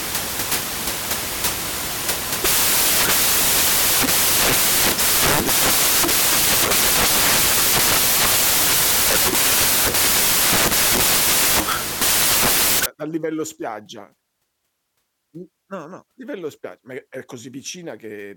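Samples built from the wrong bytes run from the start to 12.86 s, just before "dal livello spiaggia". The reader assembles each sample from mismatched bytes, through a one-byte offset, swapped byte order or wrong alignment, so the rapidly fluctuating low-order bits land in the most significant position. The speech is buried under loud, harsh broadband noise, close to white on the louder sounds.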